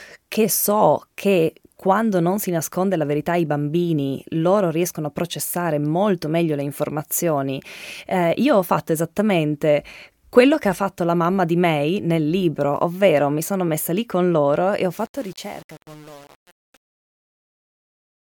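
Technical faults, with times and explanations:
14.93–18.21 s, truncation distortion on a fade: Right after "con loro e ho", the fade-out that begins around 15 s and ends at 18.2 s turns gritty. The gain stage keeps too few bits and adds no dither, and the coarseness points to roughly 7-bit resolution. As the level drops toward the smallest step, the waveform collapses into a few square steps.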